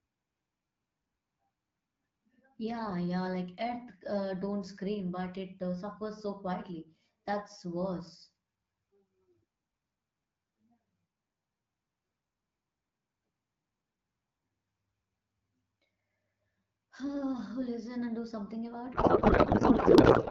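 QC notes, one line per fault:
18.93–20.30 s, codec payload misread: right after "and do something about", the speech turns into garbled noise and warble that barely tracks it, running to the end. The decoder seems to read octet-aligned AMR-WB frames as bandwidth-efficient ones, so every field lands misplaced.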